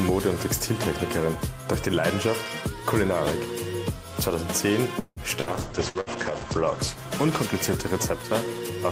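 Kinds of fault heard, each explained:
Call audio freeze: At 4.99 s the sound stretches into a fading fill, with a short silence, for about 0.2 s, then carries on; likely delayed packets draining the jitter buffer.
Burst of packet loss: At 5.40, 5.89 and 6.01 s, roughly 60 ms drops out each time, covered by a brief fading fill before the audio jumps ahead.
Call bitrate drop: From 5.44 s the encoder falls from 64 to 10 kbps, the top end narrowing from 20 kHz to 8 kHz, so everything turns muffled and rough.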